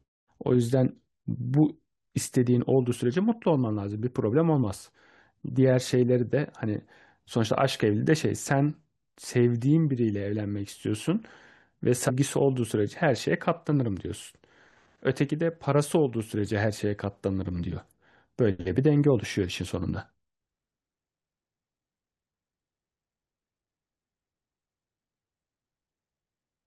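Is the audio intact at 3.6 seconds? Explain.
Yes, the speech at 3.6 seconds plays through cleanly, with no dropout, click, distortion or other fault at that moment.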